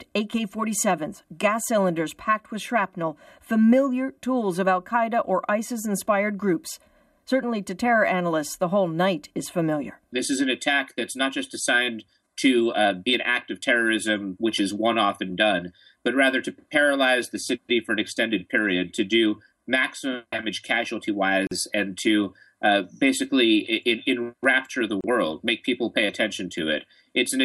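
Gaps at a join of encoded pieces appear at 21.47 s, a 43 ms dropout, and at 25.01 s, a 31 ms dropout. Separately encoded segments were spliced without trimming encoder delay and final-frame padding, so brief silences with smeared edges cut into continuous sound before it resumes where it stopped.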